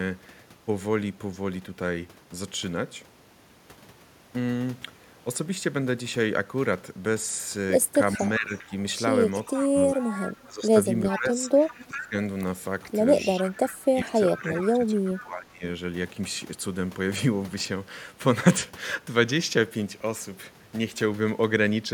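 From 8.15 to 8.72 s the speech dips by around 10 dB in short patches, and under it, from 8.17 to 8.71 s, a faint delayed copy of the voice trails 397 ms behind, roughly 20 dB down. That copy is echo leak: the far end likely played the call on a loudspeaker, and its echo canceller let part of the microphone pickup return. The dip is speech suppressed in double talk, likely because the canceller could not tell this talker from its own loudspeaker echo while both sides spoke, so it turned both down.

The pattern repeats and grows. Echo returns from 9.32 to 10.48 s at about 15 dB below the speech, and from 9.57 to 12.14 s the voice is pulled down repeatedly, by up to about 15 dB, for around one and a half seconds in total. Within that stretch, from 11.09 to 12.01 s, the echo is strongest, only about 10 dB under the speech. From 12.85 to 15.26 s the echo comes back, again about 20 dB down, and between 13.38 and 15.63 s the voice is suppressed hardest, by up to about 20 dB, for roughly another second and a half. 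Throughout, the echo keeps the same 397 ms lag.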